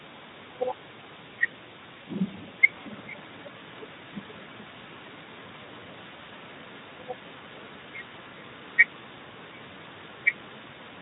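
Speech, carrying a faint delayed copy of itself throughout, trailing the direct sound by about 0.41 s and sitting around 25 dB down. This is an echo leak, likely from a far-end loudspeaker whose echo canceller let residual pickup through. At 5.65–5.68 s, VoIP packet loss concealed by the speech codec produces a brief fading smear, consistent with one lost 20 ms frame being extrapolated. Light Speex coding texture is audible, fitting a mode around 15 kbps.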